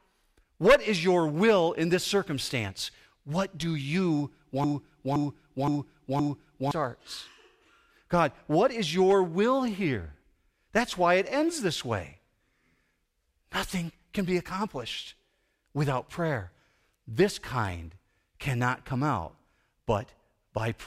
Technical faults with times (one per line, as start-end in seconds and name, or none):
0.00-20.87 block size mismatch (truncated)
4.64-6.71 broken-record loop